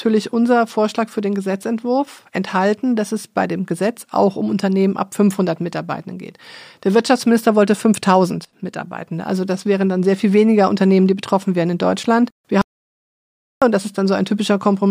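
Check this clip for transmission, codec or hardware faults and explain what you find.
One fault appears. From 12.62 s to 13.62 s the speech cuts off abruptly into silence, with no room tone, for about 1.0 s, then resumes mid-flow. This audio dropout to silence likely came from lost input, such as a disconnected device, failed link or stray mute, while recording continued writing zeros.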